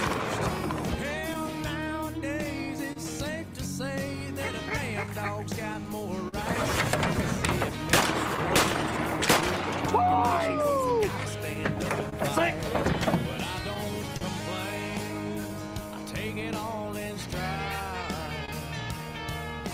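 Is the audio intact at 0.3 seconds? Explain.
No. Clock drift between sender and receiver affects the audio at 0.3 s and throughout the clip. The sending clock runs about 2 percent slow, so the receiver's buffer keeps draining and it repeats short fragments or briefly runs dry, producing small, irregularly spaced timing hiccups.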